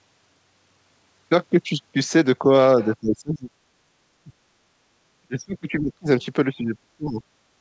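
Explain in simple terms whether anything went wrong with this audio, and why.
Speech suppressed in double talk, at 3.0 to 3.51 s, 4.23 to 4.32 s, 5.22 to 6.07 s and 6.49 to 7.22 s: the talker's voice sinks sharply or breaks into pieces, most deeply in the last stretch. The likely cause is that the other side of the call was talking at the same time. The echo canceller couldn't tell this talker apart from the loudspeaker's echo, so it turned everything down.

Background gated by the echo canceller, from 4.6 to 4.91 s: the room sound behind the voice dips for about a third of a second while the loudspeaker is playing, then comes back. The echo canceller pulled the microphone level down to keep the far side's sound from leaking back, and the room noise fell with it until the canceller let go.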